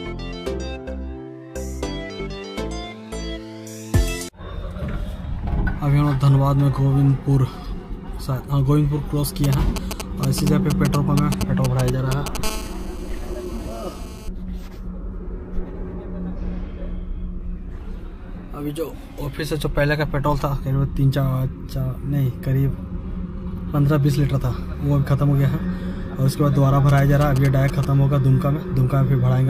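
From 9.44 to 12.37 s, GSM signalling bursts break in: a nearby 2G handset is transmitting short groups of radio bursts, as it does while negotiating with the network, and the audio circuitry rectifies them into audible energy. The result is a galloping dit-dit-dit of brief buzzes pulsing at 217 Hz, sitting only a little below the level of the wanted sound.

At 12.44 s the pattern turns into continuous GSM phone buzz, lasting until 14.29 s. The handset has moved into a call and now transmits steadily at 217 bursts per second, so the rectified pulses form a hard, raspy tone at 217 Hz, dense with harmonics and unrelated to the programme material. It runs about 16 dB below the signal.

From 26.89 to 27.85 s the GSM signalling bursts return as another short galloping cluster of 217 Hz buzzes, quieter than the first episode, well below the signal level.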